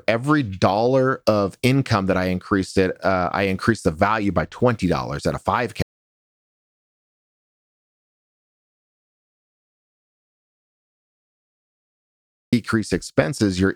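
Audio dropout to silence, 5.82 to 12.53 s: after "at a five" the speech cuts to dead silence with no room tone, likely because the input was lost while recording continued.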